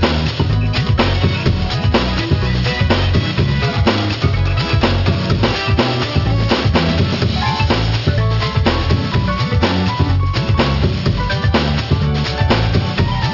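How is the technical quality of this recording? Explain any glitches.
The recording has one clear technical fault, and it runs through the whole clip.

Aliasing, throughout: the audio was downsampled without an anti-aliasing filter, which fits a drop to a 12 kHz rate. Content above 6 kHz folds back below it as false, unrelated tones, roughly 15 dB under the signal. High frequencies sound gritty and metallic, with the spectrum running hard up to 6 kHz.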